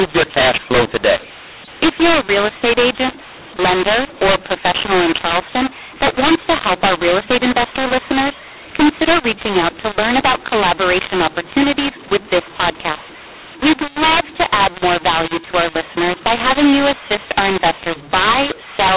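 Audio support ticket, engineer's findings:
Harsh, gritty distortion on all speech, start to end. Pauses carry hiss, not silence. Probable component: G.711 decoder. Mu-law and A-law mixed up. Mu-law bytes are expanded with the A-law table, scrambling levels and lifting near-silent samples well above zero. Band limit at 4 kHz fits the 8 kHz G.711 mu-law stream feeding it.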